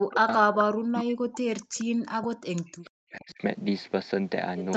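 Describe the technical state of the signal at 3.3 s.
At 3.3 s the speech sits near the end of a stretch of speech suppressed in double talk, running from 0.66 to 3.41 s. The level dips and breaks up in pieces, falling by as much as about 40 dB and adding up to some two seconds of affected signal. The likely cause is an echo canceller that could not separate the near talker from loudspeaker echo and attenuated both.

Overlapping this, from 3.3 to 3.34 s, there is a brief echo leak: a faint scrap of delayed copy trailing the speech by about 0.44 s and sitting roughly 35 dB below it. It is likely residual loudspeaker pickup that the loudspeaker side's echo canceller failed to remove and sent back.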